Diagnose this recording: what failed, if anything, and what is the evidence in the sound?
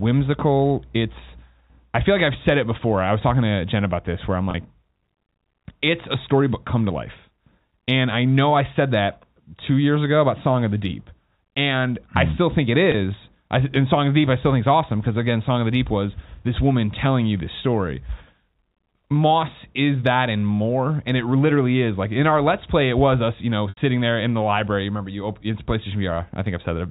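Network packet loss with pitch repetition: the receiver looped the last pitch period over 30, 20 and 80 ms gaps at 4.51, 12.92 and 23.69 s, heard as brief buzzy holds at the first two and a fade into silence at the third.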